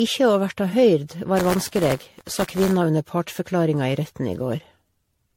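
Generation loss runs through the whole speech recording, likely from roughly seven successive MP3 passes at 64 kbit/s: swirly, hollow smearing, blurred attacks and nothing above 16.5 kHz. Buffer tearing follows from 1.37 to 2.77 s, between "ikkje å verta høyrd" and "under partsforklaringa i retten", as a 93.8 Hz robotic buzz, which fits a 512-sample buffer where a small slice of each period holds audio about 20 ms old.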